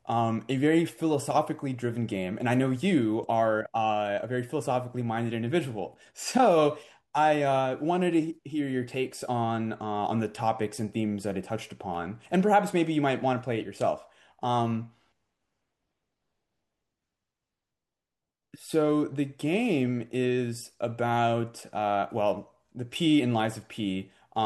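Nothing stood out as a technical problem on listening to this speech recording.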